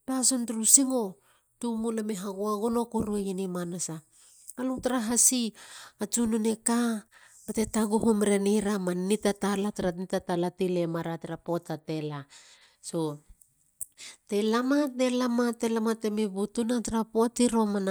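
No technical faults can be heard anywhere in the recording.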